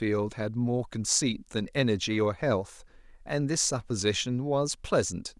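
No technical faults can be heard anywhere in the speech. Nothing in the recording calls for a timestamp or an explanation.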